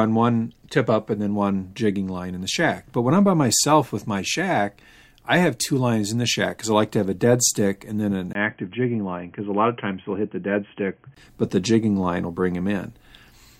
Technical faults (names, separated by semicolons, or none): input switched to a poorer device